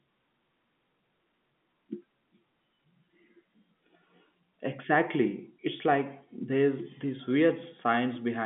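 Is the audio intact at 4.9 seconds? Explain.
Yes, at 4.9 seconds the speech is intact, with nothing wrong beyond the narrow band of its G.711 telephone coding.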